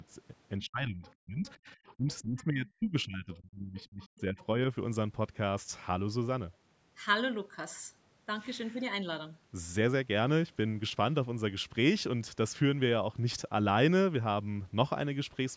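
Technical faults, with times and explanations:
0.59 to 4.38 s, speech suppressed in double talk: the speech repeatedly dips, thins and breaks off, falling as much as about 35 dB, for roughly three seconds in total. This is likely an echo canceller that could not separate the talker from the loudspeaker echo and pulled both down.
1.04 to 1.12 s, 1.47 to 1.53 s, 2.10 to 2.44 s and 3.79 to 4.46 s, other side's voice leaking through: faint scraps of a second voice come through, about 25 to 30 dB below the speech. This is likely far-end audio from the loudspeaker that the echo canceller failed to remove.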